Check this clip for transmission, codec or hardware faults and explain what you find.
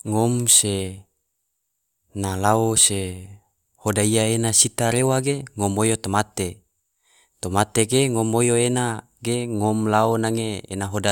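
No faults found.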